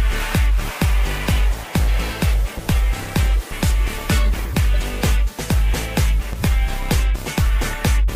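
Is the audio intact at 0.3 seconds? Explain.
Yes, the audio at 0.3 seconds is intact, with no dropout, click, distortion or other fault at that moment.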